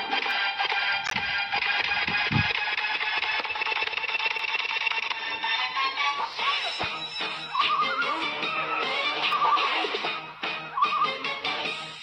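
A clock drift buffer slip, likely from two devices' clocks disagreeing by around 100 ppm, drops or repeats a short block of roughly 15 samples every 3.01 s, giving regular clicks from 0.31 to 9.33 s. A corrupt frame decoded twice spreads energy to wrong frequencies, heard as a chirp or burst of noise at 1.04–1.13 s peaking near −15 dBFS and a fainter one at 3.68 s near −35 dBFS.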